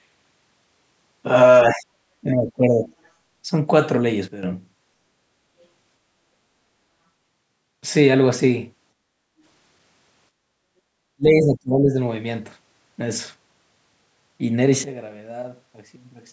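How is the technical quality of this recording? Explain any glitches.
The recording has several level glitches typical of a call's echo canceller and gain stages.

Speech suppressed in double talk at 1.7–1.88 s, 2.21–2.91 s and 11.16–11.97 s: the speech dips by up to roughly 25–30 dB, likely because the canceller mistook it for echo. On the waveform these look like pinched, hollowed stretches.

A sudden gain jump at 4.28–4.43 s drops the speech and background about 12 dB in one step. A second jump at 14.84 s drops them about 16 dB until the end. This is likely an unramped gain change, and it shows as a square-edged step in the waveform envelope.

The background is gated by the echo canceller at 10.35–10.48 s. The room sound falls about 12 dB for roughly a tenth of a second, which appears as a brief dark notch across the spectrogram.

The spectrogram is empty above 8 kHz because of the call's microphone processing, which is expected for this kind of audio.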